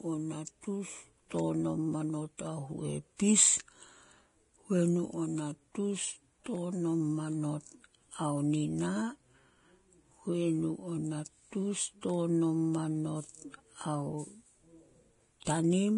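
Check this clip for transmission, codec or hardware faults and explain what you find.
One codec fault runs through the whole speech clip: Vorbis compression, likely the cause of the dull, grainy treble heard from start to finish. The encoder has discarded everything above about 10.6 kHz, and the heavy damage fits a low bitrate around 30 kbps, so the remaining upper band is quantised so coarsely that fine detail turns into hiss-like noise. Sibilants sound rough and smeared and consonant attacks blur. On a spectrogram, energy stops at a flat ceiling near 10.6 kHz, with speckled, patchy texture below it.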